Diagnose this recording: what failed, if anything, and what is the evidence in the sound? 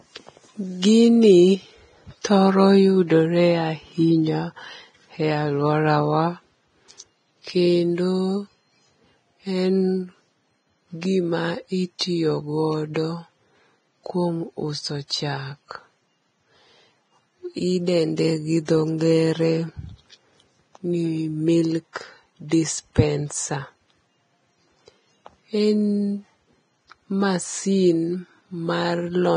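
Vorbis compression runs through the whole speech recording: nothing survives above 9.7 kHz, and the treble is hissy and grainy. This is likely heavy damage at the codec stage, consistent with a very low bitrate near 22 kbps that replaces fine spectral detail with similar-energy noise.

Pre-echo appears at 0.82 s, 2.21 to 2.25 s, 11.99 to 12.01 s, 12.94 s, 18.65 to 18.68 s and 21.93 to 21.96 s, with brief hiss of 16 to 33 ms before sharp onsets. The codec spreads its quantisation noise across each transform block, so noise meant for the attack also fills the quiet moment before it.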